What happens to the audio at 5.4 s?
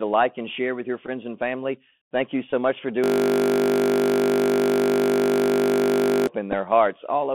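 At 5.4 s the system is in a hang loop that runs from 3.04 s to 6.27 s, starting just after "much for". The computer or driver stalled while the audio hardware kept replaying one 20 ms stretch of its ring buffer. That exact repetition at 50 Hz turns the speech into a steady, pitched buzz.

Throughout the clip, the speech also passes through a Bluetooth CVSD headset codec, which fits a 64 kbit/s one-bit-per-sample stream. CVSD tracks the waveform with up-or-down steps whose size adapts to the signal. The sound is confined to roughly 150 Hz to 3.4 kHz, with audible granular hiss and harsh, scratchy edges where the steps can't keep up.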